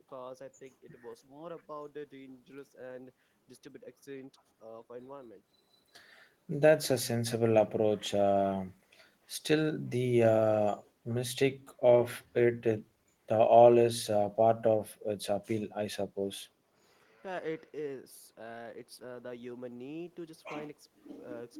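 Nothing in the recording stood out as a problem on listening.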